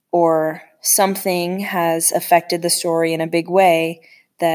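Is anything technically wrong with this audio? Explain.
No, nothing stood out as technically wrong on listening to this speech recording.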